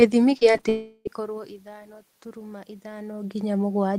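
From 0.37 to 0.65 s the speech breaks up with repeated packet loss, giving a robotic sound. Four short holes, the longest 35 ms and about 100 ms in all, are each patched by stretching the preceding sound, so about a third of that span is concealed. It sounds choppy. On a spectrogram the harmonics freeze into flat, smeared bands between normal fragments, and the waveform shows short repeated cycles in place of natural variation.

From 0.69 to 1.07 s the audio drops out entirely, most likely a long network dropout. The last sound is carried on as a fading buzz for most of that stretch, about 360 ms of concealed signal, and then the final 30 ms is silent before speech resumes on "ithano turuma", with the missing part simply gone. A spectrogram shows a smooth, decaying smear with no speech structure, then a short dark gap. The waveform tapers to near flat. The room noise in the background and a level change near 1.0 s, as the talker shifts position, are part of the recording and not part of this fault.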